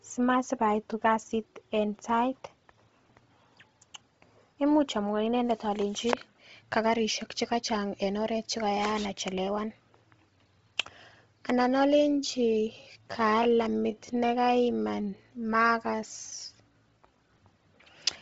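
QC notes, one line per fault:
throughout: Bluetooth LC3 compression. The audio has been squeezed through a low-bitrate transform codec, likely Bluetooth LE Audio's LC3, at a rate that sounds consistent with around 24 kbps and short frames near 7.5 ms. Nothing survives above 7.7 kHz, and within the band the encoder has starved the upper spectrum and backfilled it with noise. The damage is heavy, giving the speech a breathy, grainy edge.
11.95 to 17.21 s: time-stretched section. This stretch of speech has likely been slowed to 0.64 times its original speed, with the pitch held where it was by repeating short slices of the waveform. The pace drops abruptly while the voice stays at the same pitch, giving the section a dragged quality until normal pace resumes.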